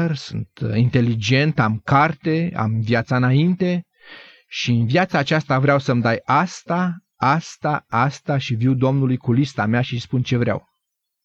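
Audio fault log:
7.92 s, repeated buffer: audio arrived late, so a block of about 6 ms, which fits a 256-sample buffer, played twice and sounds like a brief click in the speech. The waveform shows a hard seam where the copy restarts, and the spectrogram shows a thin vertical broadband line.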